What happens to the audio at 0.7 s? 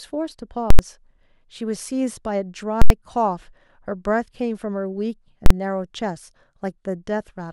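Invalid numbers at full scale hit the speech from 0.70 to 0.79 s. A calculation produced infinite or invalid values, and these were clamped to the extreme positive or negative sample value, so the output is pinned at one extreme value, far beyond the speech's peaks, for about 85 ms, a span that fits a 4096-sample processing block. Because the waveform jumps to that extreme and stays flat, you hear a very loud pop at 0.70 s, nothing in between, then a second pop at 0.79 s.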